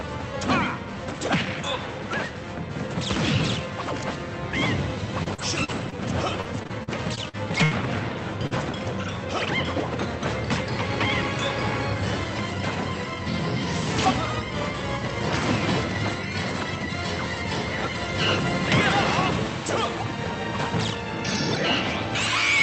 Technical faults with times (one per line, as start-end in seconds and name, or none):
5.23-7.99 repeated packet loss (robotic sound)
8.47-8.53 short concealed packet loss
8.51-8.63 lost packet rebuilt from error correction